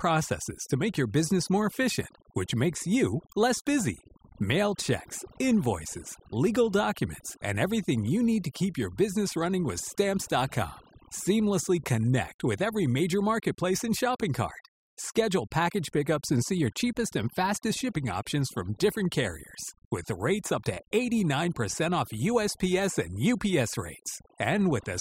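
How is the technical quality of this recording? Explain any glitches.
The technical quality is compromised by overdone noise removal across the entire clip. A noise reducer set too aggressively cuts single frequency bands down or out whenever they approach its noise estimate, removing quiet parts of the speech too. The background drops into twinkling, warbling specks, which a spectrogram shows as isolated bins flickering on and off between phrases.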